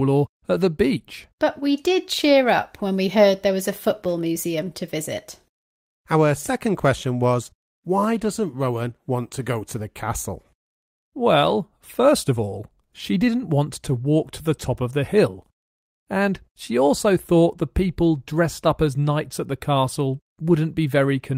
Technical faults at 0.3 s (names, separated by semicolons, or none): none